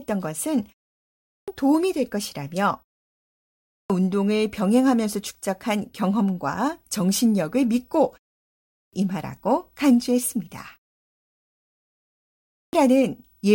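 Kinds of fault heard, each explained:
Clipped start after a pause: the output sleeps through silences and needs time to wake, so speech resuming at 0.97, 3.31, 8.42 and 12.15 s loses its first 0.51 to 0.59 s. Waveform and spectrogram show flat silence ending in an abrupt vertical edge.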